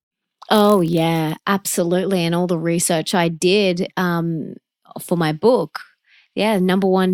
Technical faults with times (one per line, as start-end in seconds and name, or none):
0.51-1.48 block size mismatch (padded)